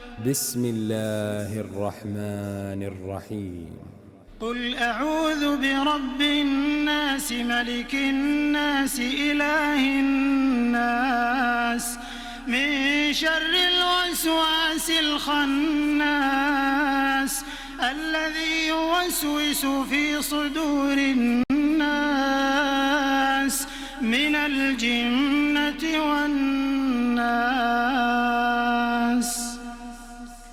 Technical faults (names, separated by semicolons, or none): Bluetooth stall